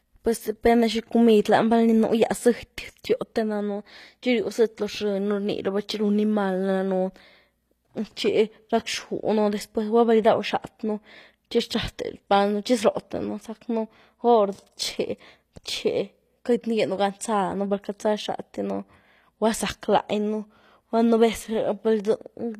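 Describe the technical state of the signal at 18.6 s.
At 18.6 s, as across the whole clip, the treble sounds gritty and metallic with nothing above 14.9 kHz, likely from HE-AAC compression at a rate that fits 24 kbps, rebuilding highs by copying lower bands upward.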